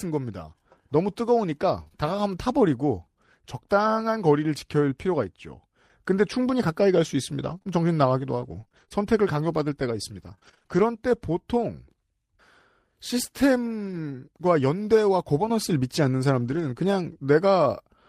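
At 1.79 s a lost packet was rebuilt from error correction. The following packet carried a low-bitrate copy, so the 20 ms plays without a gap but sounds rougher and noisier. Two short concealed packet losses follow immediately, at 1.83–1.88 s and 1.88–1.93 s. Each is a 20 ms hole that the decoder bridged by extending the preceding sound and crossfading back, which is heard as a brief smear or wobble.

From 7.43 to 10.79 s, repeated packet loss produces a choppy, robotic texture. Fourteen separate gaps, the longest 27 ms, are each patched by continuing the last sound. About 8% of the stretch is concealed, and roughly 0.4 s more comes through as rebuilt audio.

Further lost packets rebuilt from error correction occur at 13.83–13.97 s (80 ms of rebuilt audio, which fits about four packets) and 16.39–16.65 s (140 ms, consistent with about seven). Both stretches play without gaps but sound grainier and noisier than the surrounding speech.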